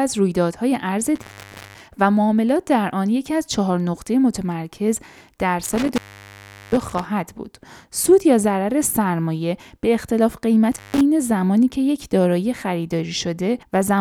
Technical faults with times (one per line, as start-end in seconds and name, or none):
1.15-1.81 intermittent contact
5.64-7.06 intermittent contact
10.72-11.01 intermittent contact